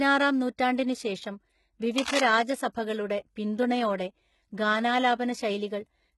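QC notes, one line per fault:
Throughout: HE-AAC compression. The treble sounds synthetic, with s sounds gritty and metallic and nothing above 11.8 kHz. This heavy damage likely comes from low-bitrate HE-AAC, around 16 kbps. Only the lower spectrum is coded, and copied-up bands fill the top, so harmonics no longer line up.
1.98 to 2.20 s: cable scratch noise. A dense, uneven burst of scratching and rustling rides over the speech for about a fifth of a second, only about 5 dB below it. The likely cause is a worn cable or connector being moved, which makes its contact resistance jump rapidly.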